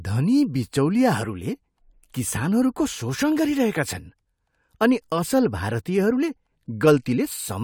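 No dropouts, glitches or distortion turn up anywhere in this bit of speech, so there's nothing here to flag.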